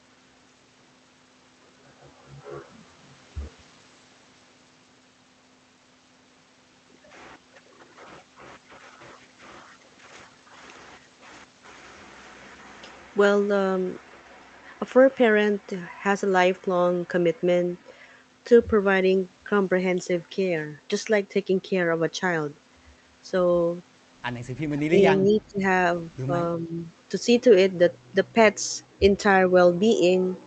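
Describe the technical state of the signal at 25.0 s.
From 24.9 to 25.03 s the speech dips briefly by roughly 10 dB: speech suppressed in double talk, likely an echo canceller ducking this side's talker along with the loudspeaker echo.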